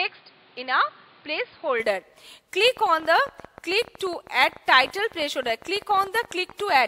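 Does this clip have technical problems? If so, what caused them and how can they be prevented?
Yes, three problems.

From 0.0 to 1.8 s the sound is dull and a bit quieter, about 5 dB down, with nothing above 5 kHz and a noise floor about 30 dB under it. That's likely an input switched to a poorer device, a narrowband microphone or headset call profile. Pin the input device and turn off automatic switching before recording.

From 2.65 to 6.77 s there's a train of clicks, around fifty of them at roughly 14 per second on an uneven beat, with peaks about as loud as the sound itself. This likely comes from electrical interference or a faulty connection or power supply. Move the recording gear away from noisy equipment and give it a clean power and USB path.

At 6.49 to 6.54 s there's a brief glitch: a corrupt frame decoded, with one damaged compressed frame played back with misread data, peaking around -20 dBFS. 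Use error-checked transfer or storage so bad frames are caught and concealed rather than played.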